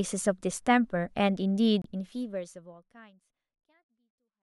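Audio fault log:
1.82–1.86 s, corrupt frame decoded: the decoder played one damaged frame anyway, and its misread codes scattered energy into wrong frequencies, giving a brief chirp, squeak, blip or burst of noise near -35 dBFS.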